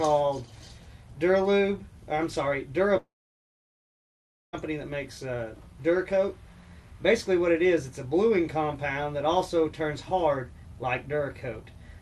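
From 2.97 s to 4.55 s the audio cuts out for about 1.56 s, most likely a long network dropout. The receiver carries the last sound forward for a moment as a fading buzz or hiss. Then roughly 1.45 s of near silence follows before the audio returns, with the missing stretch simply gone rather than delayed. The audio is band-limited at about 12 kHz, which fits an Opus call path.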